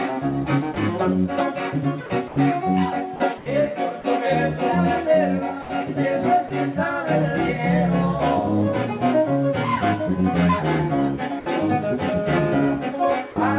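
Sound dropped by the voice detector first occurs at 0.74 to 0.76 s and recurs at 2.06 to 2.10, 2.28 to 2.36, 3.16 to 3.20, 5.62 to 5.70 and 6.48 to 6.50 s. In each of these gaps, lasting 20 to 80 ms, the audio gives way briefly to flat, steady noise and then returns. The likely cause is a sending-side voice detector that judged quieter passages to be background, stopped transmitting, and let the receiver fill the gap with synthetic noise until it triggered again.

Comfort noise in place of the background appears at 3.38 to 3.46 s. For about 80 ms the real background, which sits roughly 20 dB below the loud parts, is replaced by a smooth, featureless hiss at the same level, so the texture changes while the loudness does not. This likely comes from discontinuous transmission: the sender paused during what it took for silence, and the receiver substituted generated noise shaped to match the background's overall spectrum. 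Throughout, the narrowband call codec leaves nothing above 4 kHz.

The final dropout from the voice detector falls at 13.32 to 13.36 s, where the sound again drops to steady noise for about 40 ms before resuming.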